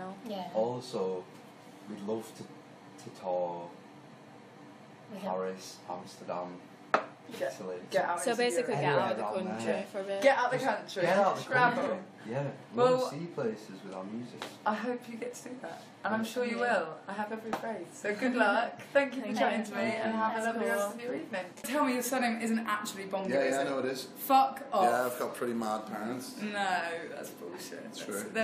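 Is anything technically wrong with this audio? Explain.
Yes. Frames out of order at 11.77 to 11.87 s: two neighbouring runs of frames were decoded in swapped order, producing a brief garbled flutter without any lost time.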